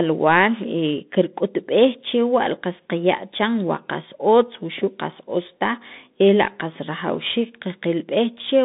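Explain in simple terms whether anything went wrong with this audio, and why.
The whole recording went through a Bluetooth CVSD headset codec. Nothing above about 3.8 kHz survives, and unlike a plain phone line, s sounds turn scratchy over a grainy hiss.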